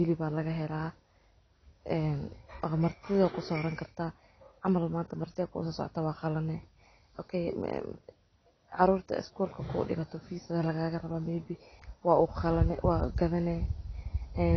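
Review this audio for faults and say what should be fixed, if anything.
Throughout, the speech sounds dull and smeared, with nothing above 6.5 kHz and a warbly, fizzy edge on sibilants, likely from AAC compression at a low bitrate, fitting around 24 kbps. Encode at a higher bitrate or keep a lossless master.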